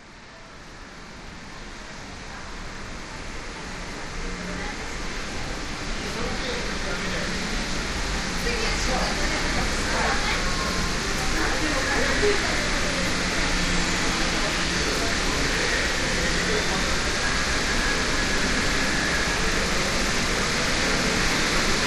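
A recording of everyday sounds, and nothing is technically wrong with it.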